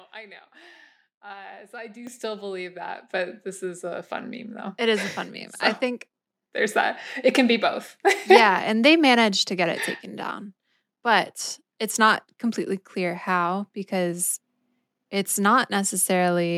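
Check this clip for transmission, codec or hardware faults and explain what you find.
The speech has one fault: the microphone volume stepped up three times in quick succession. At 2.07 s, after "so I do", the level jumps by about 10 dB. At 3.09 s, after "do still believe that", it rises about 6 dB more. At 4.11 s, after "but this is a", it climbs another 4 dB or so. Automatic gain control judged the input too quiet and raised the device volume in discrete steps. Voice and background lift together at each step, abruptly, mid-sentence.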